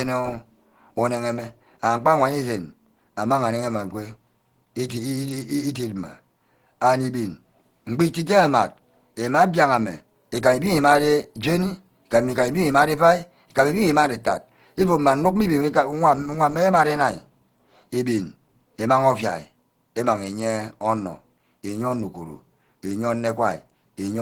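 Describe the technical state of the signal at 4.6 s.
At 4.6 s, as throughout the clip, the speech shows Opus compression, likely hybrid mode at a rate near 16 kbps, with band energy kept but detail coarsely filled. It sounds plainly muffled and hoarse, with grainy highs reaching about 20.3 kHz.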